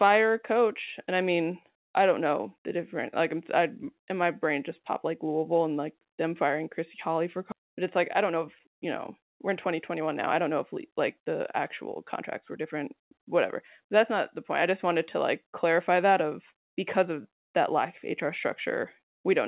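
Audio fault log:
7.52–7.54 s, skip ahead: the speech jumps straight past about 0.7 s of audio, with nothing filled in. The receiver dropped that chunk while later audio was already waiting, so the two sides butt together with no real gap and the listener just loses a bit.
8.19–12.57 s, jitter buffer speed-up: the buffer was holding more than it wanted, so it kept trimming tiny pitch-period slices to catch up. Speech runs about 7% fast at the same pitch, losing roughly a third of a second and sounding slightly rushed.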